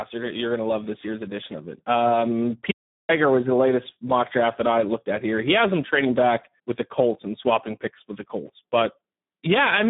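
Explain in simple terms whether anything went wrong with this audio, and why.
Yes, something went wrong, and it lasts the whole clip. The speech has been squeezed through the Speex codec at a low quality setting, so it sounds hoarse, noisy and somewhat robotic, like old game chat. A plain telephone filter would only make the speech narrow and muffled, with nothing above about 3.8 kHz. Here, the speech itself is roughened from start to finish because the codec has too little data to rebuild it cleanly.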